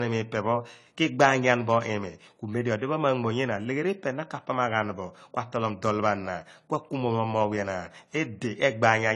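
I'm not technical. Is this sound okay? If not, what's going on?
No. The speech sounds dull and smeared throughout, with nothing above 11.4 kHz. This is likely low-bitrate audio saved at a high bitrate, so the lost detail stays lost.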